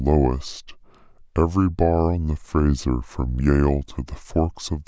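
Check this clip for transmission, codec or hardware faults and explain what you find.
The whole clip has a wrong sample rate fault. The speech plays at about 0.73 times its original speed and is pitched down by about 5.5 semitones, which fits audio recorded at 22 kHz but played back at 16 kHz with no conversion. Because the samples are read out too slowly, timing and pitch drop together, so the speech sounds low and sluggish. On a spectrogram, harmonics and formants sit compressed toward lower frequencies and every syllable is stretched in time. In the waveform, the cycles are visibly wider.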